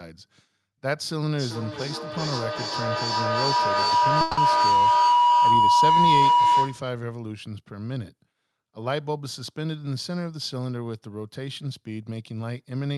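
A speech recording where, from 1.33 to 6.96 s, a ringing tone near 1 kHz swells to about 10 dB above the speech, with the loop repeating roughly every 0.4 s. This is feedback howl: two devices sharing a room and call recirculate the sound with rising gain each trip. Within it, from 4.21 to 4.39 s, the sound turns to a fading synthetic buzz or hiss for about 160 ms, likely a long network dropout that the receiver papered over with a continuation of the last audio. Throughout, the call codec's coding noise and a high-frequency ceiling around 12 kHz can be heard.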